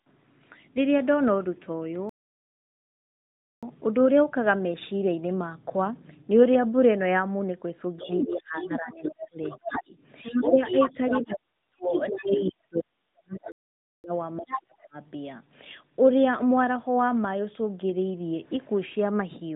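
At 2.09 s the speech stops dead and the line is fully silent until 3.63 s, a gap of about 1.5 s, before it picks up again. This is a playback stall, likely the player running dry of buffered data or its thread being held up. Unlike a dropout from echo control, nothing fades or thins first, and no other voice fills the hole. The output simply halts. A second, shorter stall of about 0.5 s falls at 13.52 to 14.04 s.

From 7.97 to 9.92 s the talker's speech is suppressed in double talk. Their level sinks by roughly 20 dB at worst, across about 1.5 s in total. A much heavier bout runs from 10.24 to 14.96 s. There the talker is pulled down by as much as about 40 dB, in patches adding up to roughly 3 s, and it overlaps the second stall. The likely cause is an echo canceller that cannot tell the talker from loudspeaker echo during overlap and turns both down. That pairing with the other voice is what sets it apart from a stall.

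The other side's voice leaks through from 8.05 to 9.83 s, about 10 dB under the talker. It returns louder, only about 5 dB down, at 10.23 to 11.35 s, 11.89 to 12.54 s and briefly at 14.47 to 14.60 s. It comes through as a far-end voice picked up off a speaker, which points to likely residual echo the canceller left in the microphone. It is not a second person in the room.

All of this rides on light AMR-NB narrowband coding, so nothing above 4 kHz is heard.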